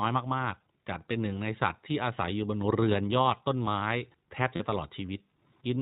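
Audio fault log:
throughout, iLBC codec: The speech is clear but slightly rough and synthetic, with plainly audible coding damage and nothing above 4 kHz. This fits narrowband iLBC in its 20 ms frame mode near 15.2 kbps, coding each frame's excitation on its own.
0.64–0.66 s and 4.56–4.62 s, lost iLBC frames: Two brief held, faintly buzzy vowel-like patches, 20 ms and then 40 ms long. The decoder filled the missing frames by repeating the last pitch cycle mixed with noise, and the speech comes back immediately because each frame stands alone.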